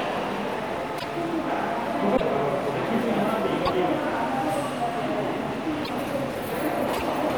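At 0.98, 2.16, 3.65, 5.84 and 6.96 s the sound skips forward with a glitch of about 56 ms, roughly two 26.1 ms frames. This is likely a broken MP3 bit reservoir: after a cut, the decoder reads leftover bytes from another frame as its borrowed data.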